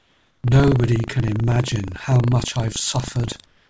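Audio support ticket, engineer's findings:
Buffer tearing, throughout the speech: steady robotic buzz at 25 Hz. Writer and hardware read pointer crossing each 40 ms period, splicing in a small slice of audio roughly 70 ms stale, with hard joins.

Comfort noise in place of the background, 0.00–0.44 s and 3.46–3.70 s: real room tone replaced by flat, featureless noise, about 3 dB and about 5 dB quieter. Likely discontinuous transmission, with the receiver synthesising noise during silence. G.722 call path audible as band ending at 8 kHz.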